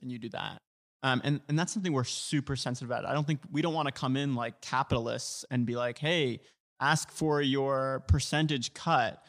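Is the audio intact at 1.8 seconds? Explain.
No. A Bluetooth SBC bit pool drop runs from 1.54 to 3.20 s. The link cut the encoder's bit budget, so the top sub-bands lose their bits and the rest are coarsely quantised. The speech dulls and turns gritty, which fits a bit pool falling from 31 to 15, near 105 kbps.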